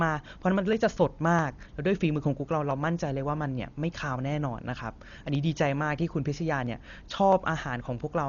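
It's a speech clip with a dull, band-limited sound, nothing above 7 kHz, and a rough, fluttery noise hanging around the voice, which is heavy codec damage. Likely Dolby Digital compression at a starved rate, something around 40 kbps, where the encoder narrows the band and the decoder fills the bare frequency lines with noise. On top of that there's a click about every 0.66 s, roughly ten of them from 0.73 s to 7.98 s. Those are clock drift buffer slips, likely from two clocks disagreeing by something like 500 ppm, with around 15 samples dropped or repeated at each slip.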